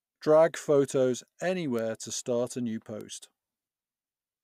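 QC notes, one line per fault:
1.79 s and 3.01 s: bit error spike, a single-sample tick just before "to start a new" (about -18 dBFS), then just after "to start a new" (about -24 dBFS). One flipped bit jumps a sample by a power of two and back, clicking broadband.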